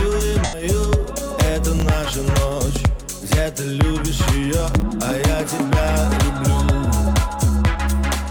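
From 0.44 to 0.63 s there is AAC frame loss with concealment. The decoder fills the gap, which fits about two lost frames, with a smeared, noisy patch. On a spectrogram it shows as blurred, flattened texture. At 1.78 to 1.82 s and 4.74 to 4.82 s, chunks arrive out of order. A 20 ms segment plays late, about one chunk and then three chunks behind, giving jumbled moments. The waveform shows abrupt discontinuities at each join.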